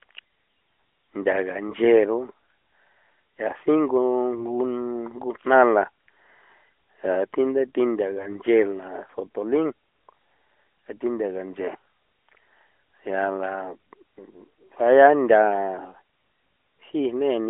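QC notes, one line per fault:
1.68–1.75 s and 10.86–10.91 s, AMR bit errors: two brief bursts where the speech turns hoarse and gargly while pitch and loudness hold. Roughly 5 percent of the weakly protected bits in a few frames were corrupted, so the excitation pulses land in the wrong places and fine gain and spectral values drift. Unlike frame loss, there is no gap, fade or repeated sound, only rough texture over the light narrowband codec colour.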